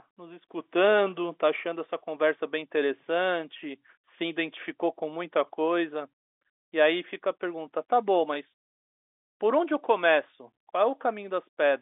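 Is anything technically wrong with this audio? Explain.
No, nothing is technically wrong: the speech carries the narrow 300 Hz to 3.6 kHz band of ordinary G.711 telephone coding, which is the normal sound of a fixed telephone line.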